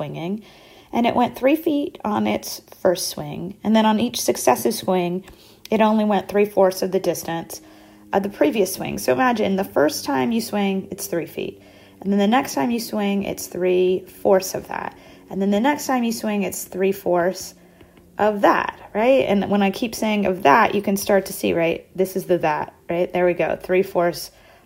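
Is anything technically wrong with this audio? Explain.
No, nothing stood out as technically wrong on listening.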